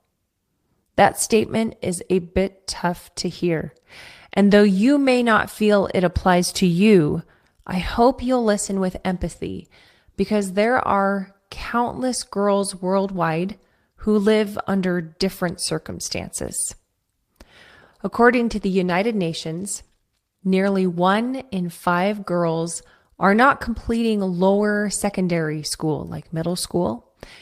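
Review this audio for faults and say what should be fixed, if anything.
No faults found in the speech recording, so nothing needs fixing.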